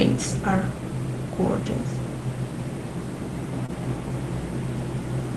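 Audio from a call path, with a short stall from a late packet at about 3.66 to 3.70 s. A packet showed up late, the jitter buffer ran dry, and the receiver stretched the last bit of sound by roughly 24 ms until it arrived, then picked up right where it left off. Nothing's lost, but that moment hangs a touch too long, and everything after sits about 24 ms later. The top end stops around 12 kHz, which fits Opus at a modest rate.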